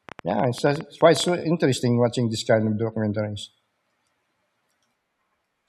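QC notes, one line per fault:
0.09 to 1.29 s, train of clicks: a burst of around fifteen sharp ticks at about 13.4 per second, spaced unevenly rather than on a steady beat, each one much the same short pop and poking roughly 5 dB above the speech, so they stand out even between syllables. Same-shaped pulses arriving in a cluster like this are likely interference from nearby gear or a faulty connection or power supply, not anything in the recording itself.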